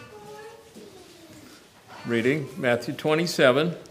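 No technical faults can be heard anywhere in this clip. Nothing in the audio calls for comment on technical grounds.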